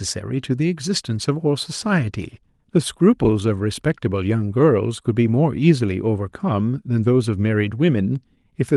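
No faults are audible in this speech; it passed through a WebRTC call path, and the top end rolls off at about 12 kHz, consistent with the Opus codec.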